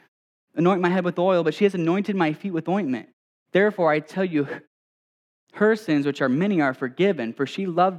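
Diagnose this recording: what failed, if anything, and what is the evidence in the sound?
Nothing in this speech recording points to a failure at any stage, so there's nothing here to diagnose.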